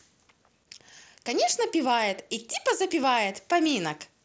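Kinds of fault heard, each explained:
Concealed Bluetooth headset packet loss: Two single packets between headset and phone went missing, each about 7.5 ms, at 1.50 s and 2.54 s. The receiver filled each gap by repeating a matching stretch of recent waveform. Both are isolated, so they are nearly hidden.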